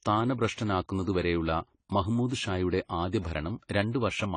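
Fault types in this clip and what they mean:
AAC compression: the speech was likely squeezed through an AAC-LC encoder at a low rate, consistent with about 24 kbps, which strips spectral detail and cuts everything above 10 kHz, leaving the sound plainly dull and smeared, with fizzy, warbling sibilants.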